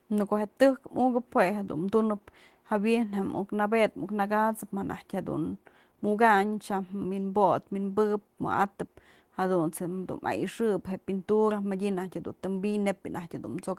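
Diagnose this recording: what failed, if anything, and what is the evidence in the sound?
Nothing failed: no stage of the chain, from capture and conversion through any processing and transmission to storage and playback, leaves an audible mark anywhere in this speech recording.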